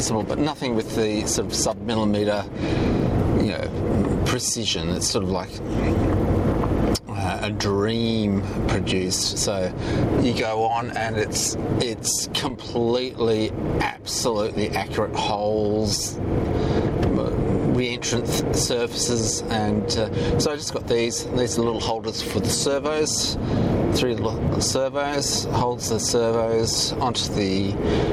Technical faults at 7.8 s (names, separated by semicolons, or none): gain pumping